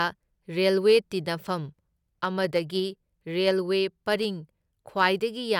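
Nothing stood out as a technical problem on listening to this speech recording.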